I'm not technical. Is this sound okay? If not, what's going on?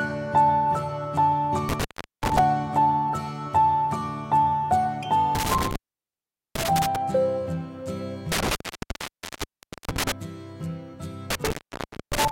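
No, there's a problem: an intermittent contact, basically a loose cable or plug that briefly loses its connection. The sound drops out four times, with a crackle as it cuts and returns: at 1.69 s for about 0.4 s, at 5.35 s for about 0.8 s, at 8.32 s for about 1.3 s, and at 11.30 s for about 0.6 s. Reseating or swapping the cable is the usual fix.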